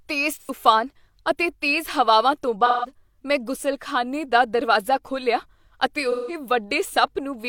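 AAC frame loss with concealment at 0.33–0.50 s, 2.65–2.90 s and 6.11–6.35 s: the decoder refills missing frames from the last good spectrum, producing smeared, phasey patches.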